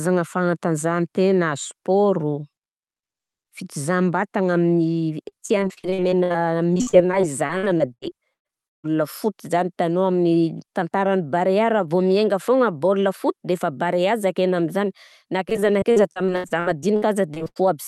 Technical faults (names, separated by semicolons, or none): repeated packet loss (robotic sound)